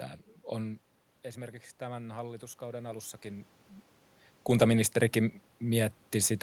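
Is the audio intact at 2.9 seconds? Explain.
No. From 1.78 to 3.53 s, automatic gain rising lifts the level by about 3 dB after the input dropped about 13 dB. Room noise swells with the voice, which marks it as gain, not movement.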